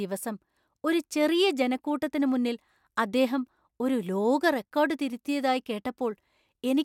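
Nothing goes wrong anywhere in this bit of speech, so there's no fault to point to at any moment.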